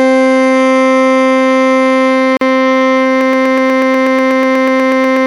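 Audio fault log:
2.37 s: gap at a join of encoded pieces, a 43 ms hole in the music where separately encoded pieces were butted together without trimming their padding silence.
3.21 s to the end: broken-record loop, a 122 ms fragment repeating back to back about 17 times, likely a stalled stream resending its last buffer.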